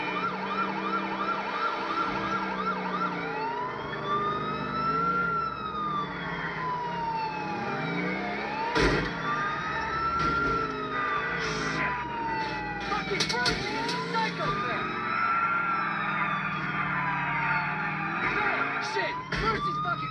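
No technical faults occur at any point in the audio, so there is nothing to describe.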